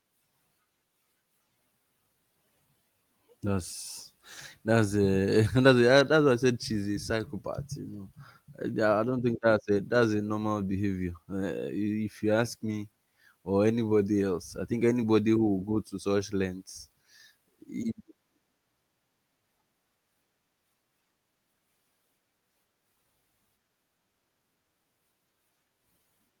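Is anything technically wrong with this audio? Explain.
Yes. Two lost packets were rebuilt from error correction, at 7.93 s and at 12.71 s just after "you ask". In each, a lost packet was replaced by a low-bitrate copy carried in the next packet, so there is no gap, but each 20 ms rebuilt frame sounds briefly rougher and noisier.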